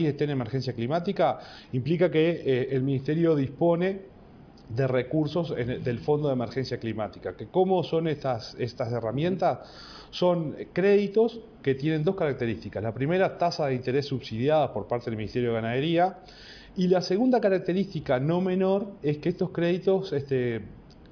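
No technical faults are audible anywhere in the audio.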